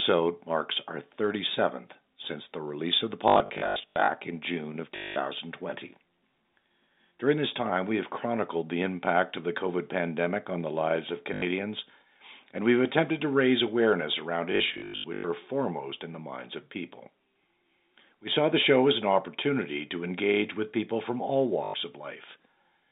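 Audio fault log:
3.28–4.08 s, 4.96–5.16 s, 11.34–11.42 s, 14.52–15.24 s, 21.64–21.74 s, packet loss with last packet repeated: the receiver replays the last packet it got until new ones arrive. A replay seldom lines up with the pitch of the telephone-band speech, and the runs of up to 200 ms buzz at about 50 Hz, which fits 20 ms packets. The first and fourth ranges are scattered losses heard as a robotic stutter.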